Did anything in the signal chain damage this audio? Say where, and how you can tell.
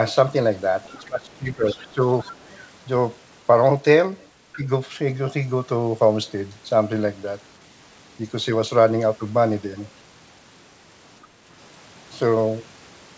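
Yes. The damage sits in the call processing stage, in its echo control. Between 0.86 and 2.02 s the talker's speech is pulled down by roughly 20 dB in pieces, about a second in total, and again briefly from 4.56 to 4.66 s by about 10 dB. This is speech suppressed in double talk, likely because the echo canceller mistook overlapping speech for its own loudspeaker echo and attenuated everything. On the waveform the envelope caves in mid-phrase, and the spectrogram shows harmonics fading or breaking into gaps.

The same stage lets the other side's voice leak through: faint at 0.89 to 1.06 s, about 30 dB under the talker, then about 20 dB under at 1.66 to 1.94 s, 2.20 to 2.58 s and 4.53 to 4.59 s. The canceller likely left residual loudspeaker echo in the microphone signal. A spectrogram shows a weak second harmonic series running out of step with the main voice, within the call path's band, which stops at 8 kHz.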